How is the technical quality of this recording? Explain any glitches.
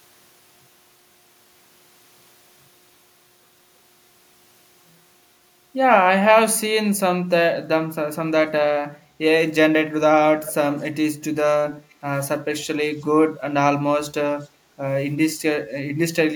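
The recording has two faults from a speakerphone path, both in the second half.

Echo leak: faint delayed copies of the speech, about 350 to 360 ms late and roughly 15 to 40 dB down, appear at 10.45–10.54, 10.79–10.83, 11.67–11.94 and 14.42–14.47 s. These are likely loudspeaker sound that the far end's echo canceller failed to remove.

Background gated by the echo canceller: from 11.87 to 11.96 s the room sound dips by up to about 7 dB for roughly 40 ms. The canceller turns the microphone down while the loudspeaker plays.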